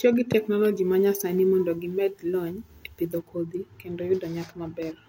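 From 0.33 s to 3.18 s the speech turns thin and glassy, with sibilants hissing forward and the upper register sounding brittle, until just before "kodhi kendo" the tone settles. This is pre-emphasis left on: the treble was lifted ahead of recording or transmission, following what sounds like the 50 µs FM curve, but the matching de-emphasis never followed. The top end sits about 10 dB high at 10 kHz relative to 1 kHz.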